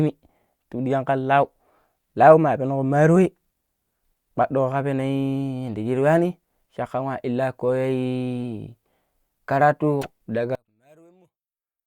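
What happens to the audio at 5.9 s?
Nothing goes wrong at 5.9 s: the speech runs through that moment intact, with no dropout, click or distortion.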